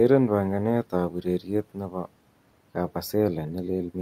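From 1.1 to 2.07 s, speech is cut by the noise suppressor. It mistakes parts of the speech for background and pulls them down by up to about 12 dB. Roughly half a second sounds swallowed and faint. The room noise sits about 26 dB below.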